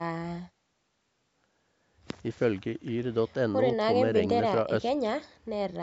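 No faults are present in the speech; the call microphone processing trims the lowest bass as intended and leaves nothing above 8 kHz.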